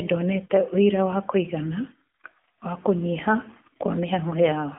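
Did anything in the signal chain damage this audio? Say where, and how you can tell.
Yes, at the codec stage, for the whole clip. This is AMR narrowband mobile codec damage: the speech is confined to a telephone band of roughly 150 Hz to 3.5 kHz, with nothing above 3.6 kHz, and it has a plainly audible buzzy, synthetic texture. AMR-NB samples at 8 kHz and rebuilds speech from a vocal-tract model driven by sparse pulses. The heavy coloration fits a low mode around 8 kbps.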